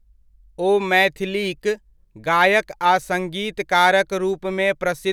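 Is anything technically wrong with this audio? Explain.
No, nothing technically wrong turns up here; the speech comes through steadily with no faults to point to.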